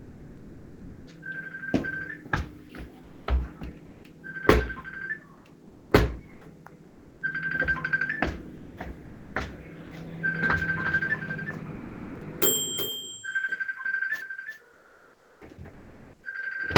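From 0 to 1.07 s the opening sound is dropped by the voice detector, likely because the sender mistook it as background. About half a second of real sound gives way to steady, flat noise until transmission resumes.

From 3.03 to 4.03 s, and again from 5.37 to 7.21 s, comfort noise likely takes the place of the background during discontinuous transmission. Unlike a dropout, no foreground sound is lost. The textured background simply turns smooth and featureless for roughly 0.4 s and 0.7 s respectively.

From 8.57 to 9.91 s the sound is chopped by the voice detector, likely switching on and off repeatedly. The sound drops out in two or more holes, about half a second in all, rather than in one single gap.

From 10.79 s to the end a doubled audio track is likely present. A full-band copy trails about 400 ms behind at roughly 10 dB lower, starting abruptly with no decay or room colouring, so it is a duplicate rather than an echo or reverb.

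From 11.75 to 12.21 s sound is again likely dropped by the voice detector, with nearly half a second lost to noise.

From 14.73 to 16.23 s comfort noise likely replaces the background again, for roughly 1.2 s.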